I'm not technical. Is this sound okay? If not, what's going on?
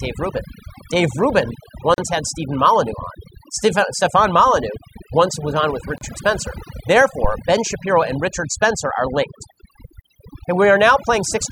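No. The whole clip has overdone noise removal: a cleanup tool was set too strong, so the background drops and breaks up into twinkling specks, and softer parts of the voice get removed too. Real background noise would hiss steadily, not twinkle.

There are three short silences, each a gap at a join of encoded pieces. The audio was saved in separate chunks and joined with small blanks left in. They fall at 1.94 to 1.98 seconds, at 5.98 to 6.01 seconds just after "once was on with", and at 10.01 to 10.04 seconds just after "are linked". Each lasts about 32 to 39 thousandths of a second, and they come every 4 seconds. Unlike a dropout, the voice picks up exactly where it stopped.

From 7.24 to 7.36 seconds there is a phantom power thump, a deep low bump caused by the microphone's power being switched on or off on a live input. It dies away within a few hundredths of a second. A bumped microphone would sound more like handling, while this is a single electrical pulse.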